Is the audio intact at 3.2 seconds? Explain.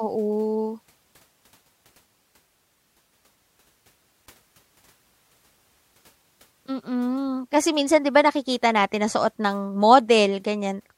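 Yes, the speech at 3.2 seconds is intact, with no dropout, click, distortion or other fault at that point.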